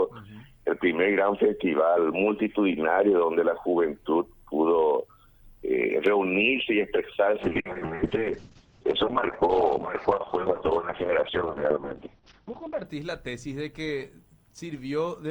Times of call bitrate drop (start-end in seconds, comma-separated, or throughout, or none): 7.44-12.91